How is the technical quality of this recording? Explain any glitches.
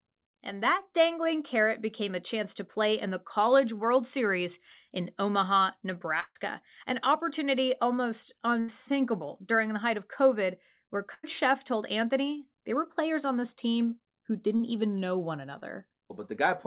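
The speech has dropouts from lost packets. It also sounds like a telephone call, with nothing above 4 kHz, which fits a 64 kbps G.711 mu-law path.

Burst of packet loss at 6.2 to 6.38 s, just before "an opportunity almost", then at 8.6 to 8.71 s after it, and at 11.14 to 11.26 s. Consecutive packets never arrived. The receiver stretched the last sound into a fading buzz or hiss for 80 to 150 ms. The first gap ends in a brief silence. Speech then resumes with a piece missing.

Short concealed packet loss at 14.56 to 14.62 s and at 15.58 to 15.64 s, after "even know one". About 30 ms went missing each time. Synthesized fill covers the gap and causes a brief smear or wobble.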